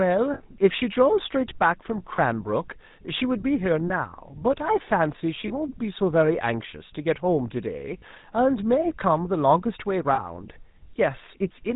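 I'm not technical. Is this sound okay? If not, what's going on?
No. GSM full-rate codec damage runs throughout: this old phone codec rebuilds speech from a simplified model and cuts everything above 4 kHz, leaving it buzzy and gravelly. Lost GSM frames cause brief rough, metallic rings at 0.34–0.41, 2.16–2.19, 3.88–3.91, 5.48–5.51, 7.98–8.03 and 10.14–10.20 s, where missing audio was patched by repeating the last good sound.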